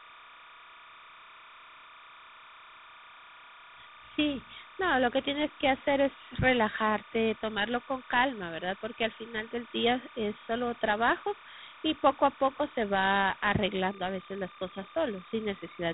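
From the first second to the end, linear timecode running at 29.97 frames per second has leaked from a neighbouring track or cable into the audio path. That is timecode bleed. Because the code is a square wave flipping between two pitches near 1 and 2 kHz, it sits behind the speech as a constant chirping, warbling buzz. It sits roughly 25 dB under the voice, faint but never absent, even between phrases.

Across the same whole length, the speech has been stored with Dialogic VOX ADPCM, the 4-bit adaptive coding used for phone menus and voicemail. Its damage is plainly audible. Nothing survives above 3.9 kHz, which fits an 8,000-sample-per-second file at about 32 kbps, so the voice sounds boxed and telephone-narrow. The coarse 4-bit steps leave a gritty hiss that rises and falls with the speech itself.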